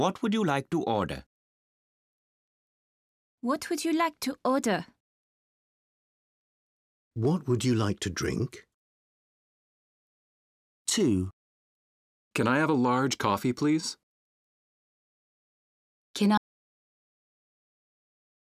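At 16.38 s the speech cuts out mid-flow into an audio dropout to silence that runs to the end. The gap is silent with no room tone, so the input was likely lost while the recorder kept writing silence. Whatever followed is gone.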